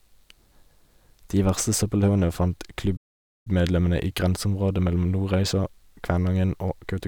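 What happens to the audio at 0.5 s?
At 0.5 s the speech runs on intact, with no dropout, click, distortion or other fault at that moment.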